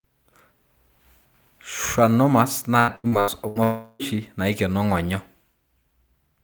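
Choppy speech runs from 2.79 to 3.58 s. The sound breaks up five times in quick succession, with the longest break lasting 83 ms, and nearly half of that stretch is patched-over sound rather than the real signal. This is repeated packet loss (robotic sound). Audio packets keep going missing or arriving too late. Each time, the receiver stretches the last sound it received to cover the hole, and the next hole follows before the speech can settle. About 360 ms of real audio is lost across this span.

Right after that, from 3.63 to 4.02 s, the speech stops and the last sound carries on as a fading buzz or hiss for roughly 360 ms, followed by a brief moment of silence. The speech then resumes with that portion simply gone. This is most likely a long network dropout: nothing arrived for this stretch, so the receiver extended the final fragment until it died away, and the missing audio was never recovered.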